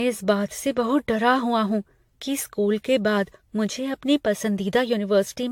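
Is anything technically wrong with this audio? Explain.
Yes. Throughout the speech the sound is swirly, smeared and hollow, with consonant attacks blurred and nothing above 18.6 kHz. This is generation loss, likely from the audio being decoded and re-encoded around seven times with AAC-LC. Each pass quantises again on a shifted frame grid, so noise and spectral holes accumulate. The result is worse than a single encode at a rate that sounds like about 96 kbit/s would give.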